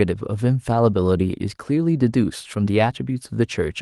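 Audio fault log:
No fault is heard in the speech.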